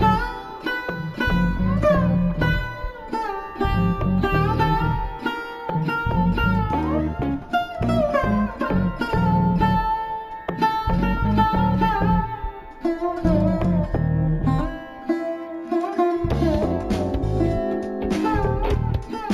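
Throughout, there's imaging from linear upsampling: straight-line interpolation, likely from a 16 kHz original, dulls the top and leaves faint mirrored images between 8 and 16 kHz, heard as a slight metallic shimmer.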